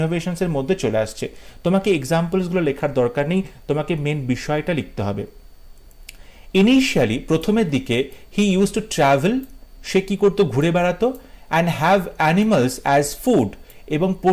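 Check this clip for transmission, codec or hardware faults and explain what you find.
Nothing in this audio points to a transmission, codec or hardware fault.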